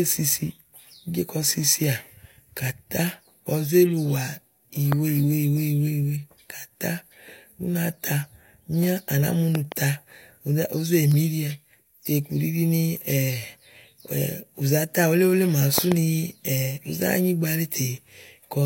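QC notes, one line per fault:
4.92–4.95 s, 9.55–9.74 s, 15.78–15.94 s, loud pop: a sudden voltage step or pulse, likely from a plug, switch, static discharge or driver glitch, enters the chain and is shaped by the following circuits. It is heard as a sharp pop, doubled at 9.55 s and 15.78 s, peaking roughly 15 dB above the speech, which continues underneath.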